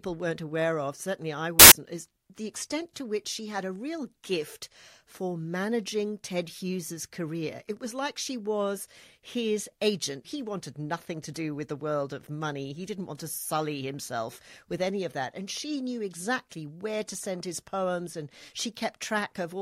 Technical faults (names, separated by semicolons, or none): samples built from the wrong bytes